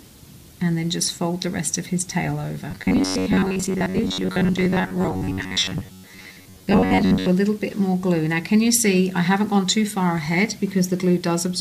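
From 2.71 to 7.29 s, audio was likely arriving too seldom, so the playback side kept filling the gaps by repeating its last short buffer of roughly 10.7 ms while the real material was skipped. That is robotic sound from repeated short buffers: for around 70% of that stretch the repeats impose a fixed pitch of 93.8 Hz, turning the sound into a rigid, metallic buzz that only loosely tracks the original.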